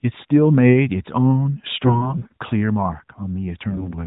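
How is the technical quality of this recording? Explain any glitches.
Two rough patches stand out, both AMR bit errors. From 1.82 to 2.32 s, and again from 3.70 to 3.92 s, the speech holds roughly its pitch and level but turns hoarse, scratchy and gargly. Roughly one in ten of the less-protected bits in those frames came through flipped, while the checksum on the critical bits still passed. So the decoder placed its excitation pulses wrongly and got the fine pitch, gain and spectral detail off.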